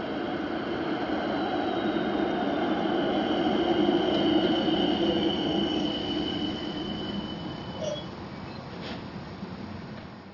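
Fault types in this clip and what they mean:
Aliasing: The rate was lowered without filtering first. Energy above 6 kHz folds back to unrelated frequencies. This fits a drop from 44.1 kHz to 12 kHz. The folded content sits about 20 dB below the sound. The spectrum runs hard up to 6 kHz.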